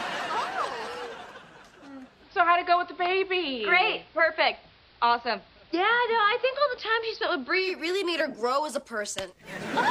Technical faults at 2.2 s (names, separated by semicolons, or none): digital radio blending to analogue